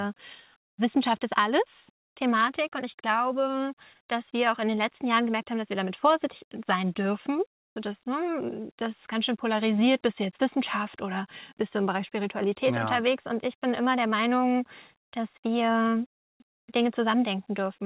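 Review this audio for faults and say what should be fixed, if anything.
From 7.6 to 7.76 s, for about 160 ms, the faint background drops by about 21 dB and turns into a flat, featureless hiss before the real sound returns. This is likely comfort noise in place of the background. With a background about 64 dB below the loudest parts, the sender's activity detector judged the gap silent and stopped transmitting. The receiver then filled it with synthetic noise that only roughly matches the real background. The call path's 4 kHz band limit, as expected from a G.711-style telephone codec, is audible throughout. Disabling discontinuous transmission, or lowering the detector's silence threshold, would keep the genuine background flowing through quiet passages.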